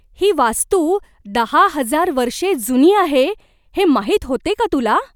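No faults are audible anywhere in the recording.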